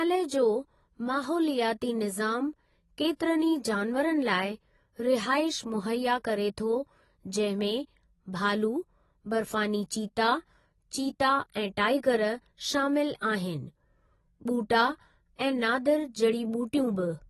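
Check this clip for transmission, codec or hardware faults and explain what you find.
One fault runs throughout: likely AAC compression, audible for the whole clip. Speech is dull and smeared, with fizzy sibilants and nothing above 12 kHz, which fits a low bitrate around 32 kbps. A spectrogram would show a flat ceiling and patchy gaps beneath it.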